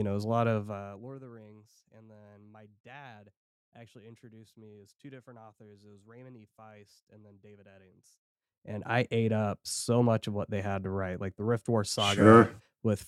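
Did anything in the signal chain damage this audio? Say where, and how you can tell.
No, nothing in the signal chain stood out as having damaged this speech on listening.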